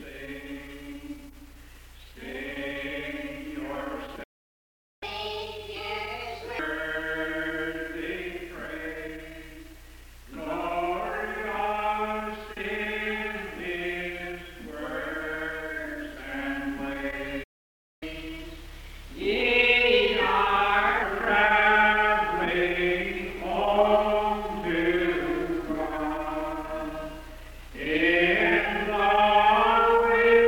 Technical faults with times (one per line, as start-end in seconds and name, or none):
4.23-5.03 playback stall
5.03-6.59 catch-up at higher speed
17.43-18.03 playback stall
18.03-21.03 catch-up at higher speed